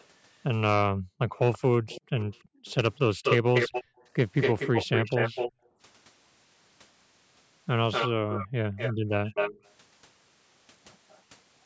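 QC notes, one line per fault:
0.0–0.06 s and 11.1–11.21 s, echo leak: a faint delayed copy, about 35 dB down, at 332 ms then 241 ms. It is a distinct repeat rather than diffuse reverb, likely an unremoved loudspeaker return.
1.36–5.68 s and 7.91–9.72 s, echo leak: a strong 241 ms copy, only about 5 dB below the direct sound. Its fixed delay suggests echo, not room reflection.
0.84–3.97 s, 5.52–5.79 s and 8.17–9.09 s, background gated by the echo canceller: the room tone ducks by up to about 40 dB while the loudspeaker plays, then returns.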